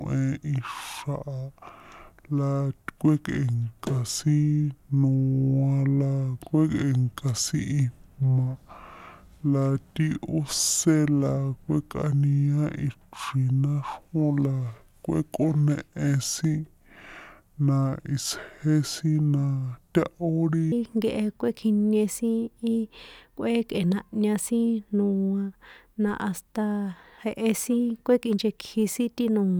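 From the start to 20.72 s the speech is a section at the wrong speed, running at 0.669 times its recorded rate. Pitch falls about seven semitones along with the tempo, so it sounds deep and dragging. The likely cause is playback against a mismatched clock.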